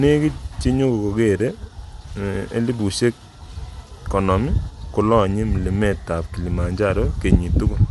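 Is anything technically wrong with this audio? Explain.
Yes. Throughout, the speech has nothing above 11.6 kHz and a plainly grainy, breathy top end, likely from Bluetooth LC3 compression filling the discarded upper spectrum with noise.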